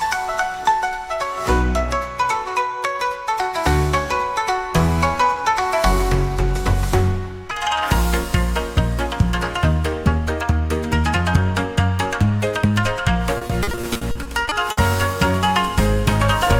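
From 7.51 s to the end of the clip the sound turns hurried and noticeably higher, raised by about four semitones and running 1.27 times too fast. This section at the wrong speed likely comes from playback or editing against the wrong clock, so pitch and tempo shift together.

Inside that fast section, from 13.37 s to 14.79 s, the audio turns choppy, with a rapid run of short holes of up to 60 ms each. This is repeated packet loss (robotic sound). Each missing piece is papered over by stretching the last sound, and about 380 ms of the stretch, around 27 percent, is concealed this way.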